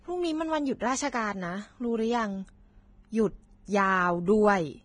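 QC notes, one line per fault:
Throughout: Vorbis compression. The speech sounds hissy and grainy across the whole clip, with a roughened texture and blurred consonant onsets. The likely cause is heavy Vorbis coding at a bitrate in the low twenties of kbps, where the treble residue is quantised so coarsely that fine detail turns into noise. On a spectrogram, everything stops sharply at 9.7 kHz, and the band below looks patchy and speckled instead of smoothly textured.
0.79 s: pre-echo. Just before a sharp onset, a brief hiss about 18 ms long leads into the attack, and the attack itself sounds softened and smeared instead of crisp. The quantisation noise budgeted for the loud onset has been spread across its whole transform block, so it also fills the quiet instant before the attack. On a waveform, a thin noise skirt precedes the transient. On a spectrogram, a broadband smear appears just ahead of the onset's vertical edge.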